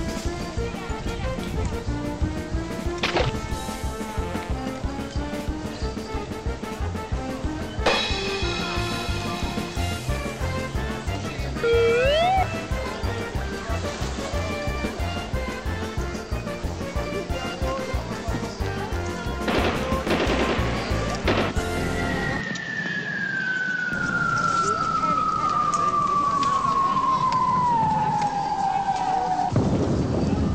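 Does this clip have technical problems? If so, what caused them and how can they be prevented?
Yes. From 22.41 to 23.93 s the sound goes dull, with nothing above 7.3 kHz, drops about 5 dB, and picks up a new noise floor around 30 dB down. There's no gap at either switch. That's likely the input switched to a poorer device and back. Lock the recording input to one device and turn off automatic switching.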